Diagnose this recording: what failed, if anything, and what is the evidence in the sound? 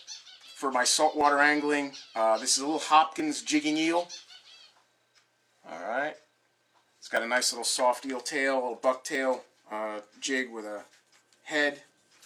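The failure is at the streaming and playback stage: overlap between stream segments. Small skips land at about 1.21–1.25 s, 3.20–3.23 s, 7.17–7.20 s and 9.15–9.19 s, each a jump of roughly 35 to 40 ms where the waveform steps abruptly. They fall on a 2 s grid, matching the segment length. Adjacent segments carried overlapping timestamps, so the player trimmed that slice as a duplicate when the audio wasn't actually repeated.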